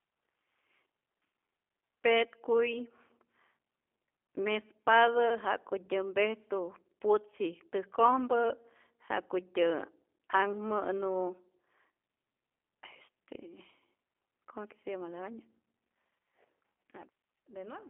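From start to finish the speech carries G.729 codec damage, plainly audible: a rough, slightly synthetic 8 kbit/s rebuild from a vocal tract filter, pitch predictor and sparse pulses, confined to a 300 Hz to 3.4 kHz line band. On a spectrogram, energy stops abruptly near 3.6 kHz, with smeared, blocky harmonics.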